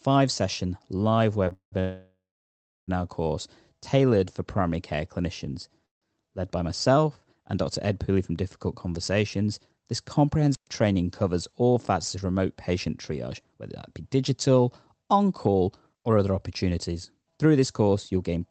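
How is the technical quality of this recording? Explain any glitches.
The recording is marred by several network and radio glitches, heard over a call-codec path whose content stops at about 8 kHz, consistent with Opus at around 24 kbps.

From 1.45 to 1.74 s, just after "session live", repeated stalls (stutter) occur. Three late-packet gaps, the longest 192 ms, are filled by stretching the last sound. This appears as smeared, repeated horizontal bands on a spectrogram.

A call audio freeze runs from 1.80 to 2.90 s, again after "session live", with a shorter one at 5.86 to 6.04 s after "for primary care clinicians". Delayed packets likely emptied the buffer. The last sound fades, and the first freeze ends in about 0.7 s of near silence, which shows as a flat waveform.

At 10.53 to 10.68 s, a wireless microphone squelch dropout briefly raises hiss, then mutes the sound for about 120 ms. The result is a near-empty vertical gap in the waveform.

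From 11.27 to 17.39 s, a jitter buffer speed-up trims about 0.4 s of pitch-period pieces. The sound runs roughly 6% faster at unchanged pitch, so the harmonics stay level while the syllables pack closer together.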